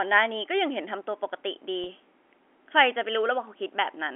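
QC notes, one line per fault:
1.84–1.86 s, packet loss with pitch repetition: a gap of about 20 ms, which fits a single lost packet on this G.711 telephone-coded line. The receiver bridged it by repeating the last pitch period of the preceding sound, so the dropout is heard as a brief held, slightly buzzy tone rather than silence. The gap is too short for the repeated cycle to fade out, and the speech returns with a short cross-fade.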